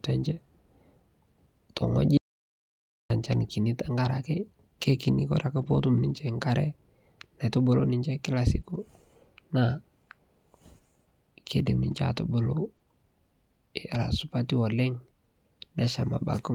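Right off the bat at 2.17 s the speech just stops dead and comes back at 3.10 s. That's an audio dropout to silence, about 0.93 s of plain silence with no room tone underneath. The input was most likely lost briefly, a disconnect or a stray mute, while the recorder kept writing. Whatever was said in that gap is simply gone, and both edges cut in mid-flow.

Right after, at 3.31 to 3.33 s, there's the first lost packet rebuilt from error correction. It's only 20 ms, which sounds like a single packet. The next packet carried a low-bitrate backup copy, so there's no hole, just a short patch of rougher, noisier texture. The same thing recurs at 5.57 to 5.79 s, where about 120 ms is rebuilt, which suggests a handful of separate losses. It happens again at 8.65 to 8.75 s (60 ms), at 11.91 to 11.93 s (20 ms), and at 13.89 to 13.95 s (40 ms). Each one is a brief grainy blemish rather than a gap.

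The 8.61 to 8.65 s spot is different: a short concealed packet loss, 20 ms that never arrived. The decoder papered over it by extending the previous sound and blending back, so you get a quick smear or wobble that runs straight into the error-corrected stretch. Another one sits at 12.77 to 12.81 s, again 20 ms filled in, heard as a tiny smudge where a short sound can get swallowed.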